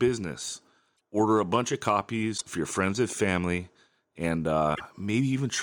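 Short garbled bursts where the sound skips ahead occur at 0.96–1.00 s, 2.37–2.42 s and 4.74–4.81 s, likely a broken MP3 bit reservoir, with frames after a cut decoding from another frame's data.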